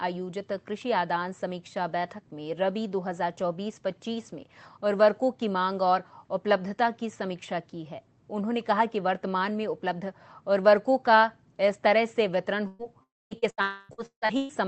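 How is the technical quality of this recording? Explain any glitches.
The last two seconds are badly damaged by network loss. A Opus call path at about 20 kbps limits the audio to 8 kHz.

From 12.67 to 12.82 s there is a burst of packet loss. About 120 ms went missing. The receiver stretched the last sound into a fading buzz or hiss.

From 13.03 to 13.34 s comes what is likely a long network dropout. The concealment fades out. Roughly a quarter-second of silence follows before the sound returns.

From 13.39 to 14.52 s there is repeated packet loss, with a robotic sound. Six gaps, the longest 159 ms, make the audio choppy. Around 41% of this stretch is patched.

Within that stretch, 13.62 to 13.92 s is likely another long network dropout. About 280 ms is lost and covered by a fading continuation, with no silence.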